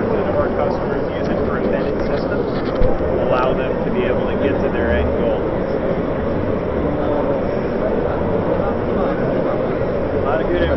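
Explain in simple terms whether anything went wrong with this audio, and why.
Nothing went wrong here: the signal stays steady and intact the whole way, with no technical faults to be heard.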